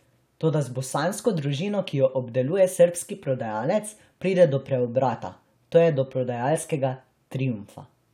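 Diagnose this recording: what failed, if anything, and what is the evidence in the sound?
No stage in the chain shows a failure: the speech carries no audible dropouts, clicks, distortion, level jumps or timing faults at any point.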